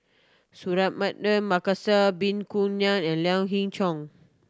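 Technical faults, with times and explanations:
Nothing stood out as a technical problem on listening to this speech recording.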